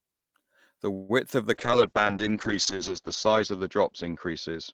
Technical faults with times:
0.93-1.11 call audio freeze
1.54-4.74 call bitrate drop

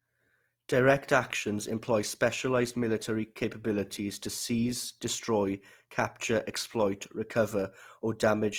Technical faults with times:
0.00-8.59 Opus compression

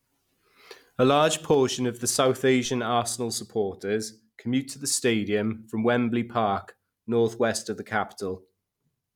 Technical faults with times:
2.65 DC step

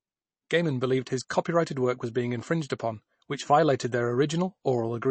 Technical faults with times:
0.00-5.11 MP3 compression

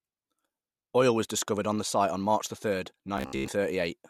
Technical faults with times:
3.18-3.48 robotic sound from repeated short buffers

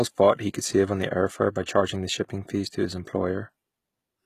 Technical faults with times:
0.00-4.25 HE-AAC compression
1.63-1.67 pre-echo

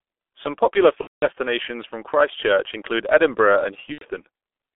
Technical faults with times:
0.00-4.76 G.723.1 codec
1.01-1.26 VoIP packet loss concealed by the speech codec
3.92-4.06 VoIP packet loss concealed by the speech codec

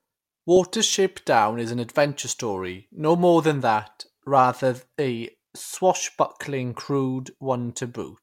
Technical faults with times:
0.87-3.51 sample clock jitter

